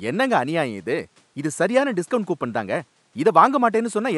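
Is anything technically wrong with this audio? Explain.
No, the signal shows no technical faults, and the faint room noise sitting about 40 dB below the speech belongs to the recording space rather than to the system.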